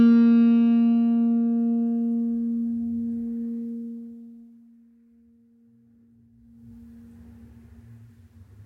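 No technical faults can be heard in this music.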